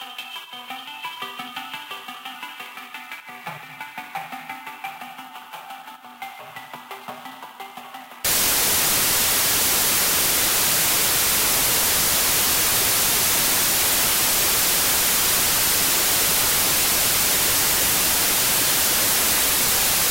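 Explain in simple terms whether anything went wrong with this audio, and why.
From 8.25 s to the end, the sound turns into loud, harsh noise with the real audio faintly buried inside, running at half speed and lower in pitch. This is a wrong sample width fault: data stored in 32-bit pieces seem to be read as 16-bit ones.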